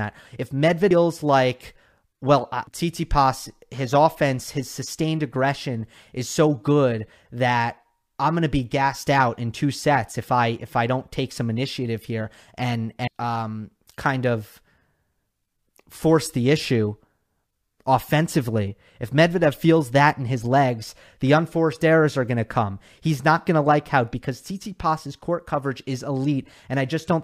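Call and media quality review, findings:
Compressed frames skipped in the speech at 0.91, 2.67 (after "like well I"), 13.08 (between "some initiative here and" and "um kind of") and 24.13 s (after "going to like how"). Each is a jump ahead, roughly 0.7 s (about 0.5 s at 13.08). Likely decoder dropping missing or damaged frames; steps fit a frame length near 93 ms.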